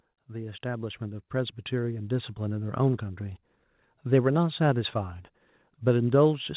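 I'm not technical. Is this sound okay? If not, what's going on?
No. From 0.26 to 2.4 s there's automatic gain rising: the call's volume control boosts everything gradually, so the voice and the background swell up together, not the voice alone.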